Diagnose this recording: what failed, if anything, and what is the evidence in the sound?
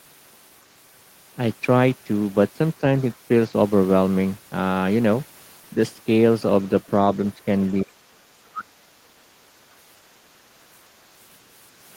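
Call processing: the speech drops from 7.83 to 8.98 s, by about 30 dB at its deepest, and dips about 15 dB from 9.67 to 9.76 s. This is likely speech suppressed in double talk, with the echo canceller turning down the near talker along with echo it couldn't separate.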